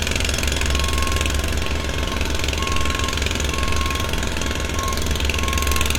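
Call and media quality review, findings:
Nothing to flag here: the sounds in this recording come through without any audible faults worth a ticket.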